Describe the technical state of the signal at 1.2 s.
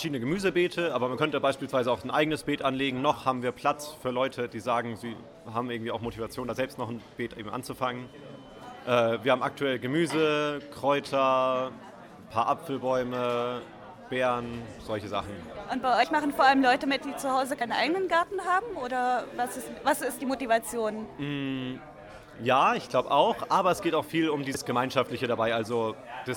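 A jump at 1.16 s where about 20 ms of audio jumps ahead: compressed frames skipped, dropped as missing or damaged.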